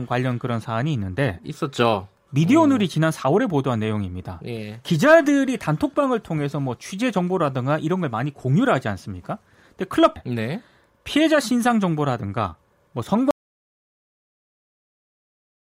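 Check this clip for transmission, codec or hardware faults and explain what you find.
Two faults can be heard in this speech clip.

Stream segment skipped, at 10.15 s: the speech jumps abruptly forward with a brief blip. A segment of the stream likely failed to load, so the player went straight on to the next and that stretch of the recording is simply missing.

Audio dropout to silence, from 13.31 s to the end: the speech cuts off mid-flow into silence with no room tone. The input was likely lost, through a disconnected device, failed link or mute, while the recorder kept writing silence.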